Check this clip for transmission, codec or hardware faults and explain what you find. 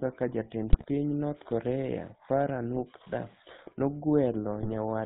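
Two faults are present: GSM full-rate coding across the whole speech clip, and three bursts of GSM bit errors.

The GSM full-rate codec runs from start to finish. It models the vocal tract and excites it with sparse, regular pulses. Nothing passes above 4 kHz. The voice sounds buzzy and gravelly, which fits the old 13 kbps GSM coder.

GSM bit errors strike at 0.68 to 0.85 s, 2.76 to 2.81 s and 4.60 to 4.78 s. Corrupted filter, pitch and gain values reach the decoder. Each frame they hit is distorted or jumps in level. The speech breaks into squawks, pops and gargling.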